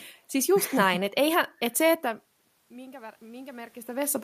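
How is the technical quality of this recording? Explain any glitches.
The recording has one technical glitch, an automatic gain rise near the end.

Automatic gain rising, from 2.96 s to the end at about 4.24 s: the input level fell by about 20 dB, and the automatic gain control responded by pushing its gain up gradually rather than at once. The voice and the room noise behind it swell together over that last second or so. The changes in loudness around 2 s and 3.5 s come from the talker moving relative to the microphone, not from the system.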